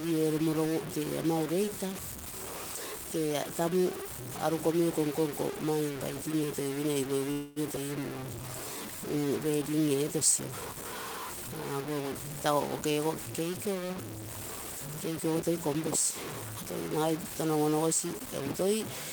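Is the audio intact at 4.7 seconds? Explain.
No. At 4.7 seconds, as across the whole clip, the speech carries low bit depth without dither, likely from truncation to about 5 bits. The error sits only around 10 dB below the speech and follows it, so the grit swells and fades with each sound and drops to silence or sputters in pauses, unlike steady hiss.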